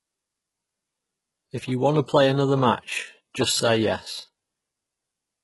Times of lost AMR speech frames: none

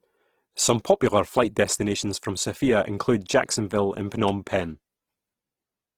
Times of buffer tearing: none

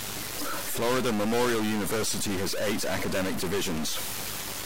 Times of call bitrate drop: none

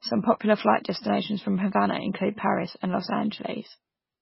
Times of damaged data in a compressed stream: none

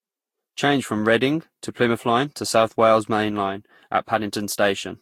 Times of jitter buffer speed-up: none

